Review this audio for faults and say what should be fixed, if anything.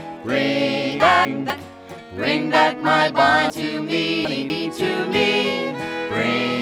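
Chunks out of order at 1.0–1.5 s (a 250 ms block arriving one slot late) and 3.5–4.5 s (three slots late) produce jumbled sound at the hard joins. Reorder chunks by sequence number before writing or playback.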